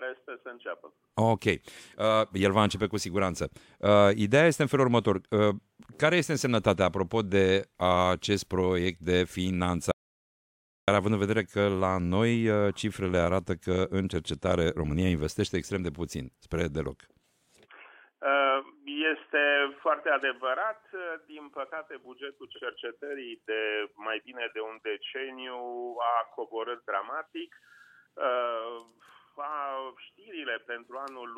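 The audio has an audio dropout to silence from 9.92 to 10.88 s, nearly a second of silence, likely from the input briefly disconnecting or muting. Unlike a quiet pause, no room tone or noise floor survives, and the sound cuts off and resumes abruptly rather than fading. At 22.55 to 22.60 s there are repeated frames: a single 46.4 ms block plays twice, giving a brief stutter. Unlike a dropout, nothing is lost; the same fragment recurs and the audio grows by 46.4 ms.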